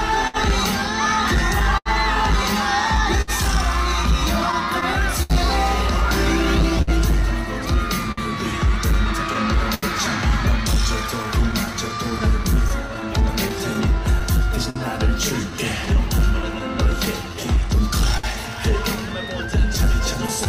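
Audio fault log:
throughout: clock drift between sender and receiver. The sending clock runs roughly 5% slow, so the jitter buffer keeps draining and the receiver must stretch or repeat small slices to keep playing, leaving small timing hiccups scattered unevenly across the whole clip.
0.27 s to 20.48 s: scattered short gaps. Around forty late or lost packets left small holes, each filled by extending the preceding sound, about 0.7 s in total, the longest near 70 ms. The audio comes out about 136 ms longer, with brief smears and ticks.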